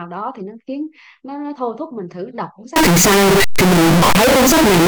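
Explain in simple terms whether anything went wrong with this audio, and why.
A float read as integer fault: from 2.76 s to the end, 32-bit float samples were likely read as whole numbers, so the speech turns blaring, harsh and buzzy.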